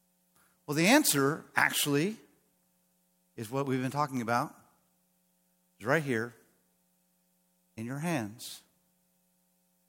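From 0.17 s to 9.67 s, periodic USB or driver dropouts recur every 0.5 s, about twenty in all. Each time the driver stalls, a fraction of a millisecond of speech is replaced by silence, producing evenly spaced ticks audible only while speech is present.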